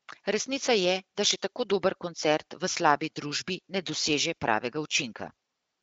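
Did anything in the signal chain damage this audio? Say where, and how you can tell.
No, nothing in the chain has harmed this speech; it's simply carried over an AMR wideband (HD Voice) link in what sounds like the 12.65 kbit/s mode, which leaves only the light coding texture you'd expect at that rate.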